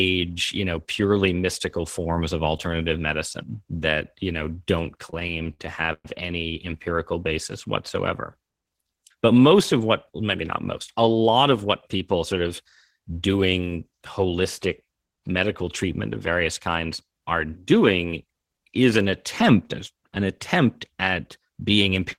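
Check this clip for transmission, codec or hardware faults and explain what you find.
Two transmission faults are audible in this speech clip: a stretch of repeated stalls and two later passages of jitter buffer speed-up.

Repeated stalls (stutter) run from 5.10 to 6.06 s, between "that you know don't" and "any empirical basis whatsoever". Packets arrived late, so the jitter buffer ran dry 11 times. The receiver extended the last sound each time, filling 281 ms (about 30% of the span), with the longest gap at 116 ms. Nothing is lost, but the speech drags and stutters.

Jitter buffer speed-up occurs from 16.67 to 17.72 s, after "medical treatment of various", and from 21.09 to 22.18 s, after "an attempt an attempt". Too much audio had built up in the buffer, so the receiver removed short pitch-period pieces, about a tenth of a second in each passage. The speech runs at 108% and 107% speed at an unchanged pitch and sounds hurried.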